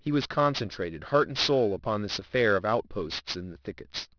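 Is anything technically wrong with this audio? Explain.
Yes, the speech shows aliasing throughout. The rate appears to have dropped from 24 kHz to 11 kHz without filtering, folding energy above 5.5 kHz back down as gritty, metallic sibilants about 10 dB below the speech. A spectrogram shows mirrored streaks running hard up to 5.5 kHz.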